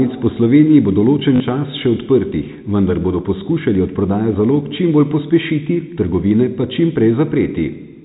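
At 1.36 to 1.40 s, just before "čas še", packet loss with last packet repeated covered about 40 ms, likely two 20 ms packets, producing a brief robotic stutter.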